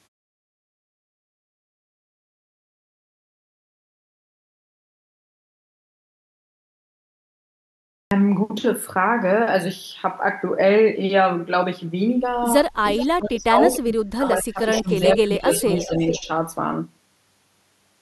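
Speech that opens after about 8 s of silence comes in abruptly at 8.03 s, its first 83 ms or so missing. This is a clipped start after a pause: the playback device went idle during the long silence and needed that moment to wake before sound could pass. From 12.96 s a delayed copy of the talker appears in scraps at 12.96, 13.72 and 14.74 s, then more continuously from 15.37 to 16.24 s. It trails by about 0.43 s and sits roughly 10 dB below the speech, nearer 20 dB at 13.72 s. This echo leak likely comes from a loudspeaker on the far end whose echo canceller let part of its microphone pickup back through. Overlapping this, the main voice dips in pieces. From 13.01 to 15.44 s it drops by as much as about 30 dB, for around a second and a half in total. Shallower dips of about 10 dB follow at 15.62 to 15.92 s and about 5 dB at 16.19 to 16.31 s. That is speech suppressed in double talk, likely the canceller turning everything down while both sides were active at once.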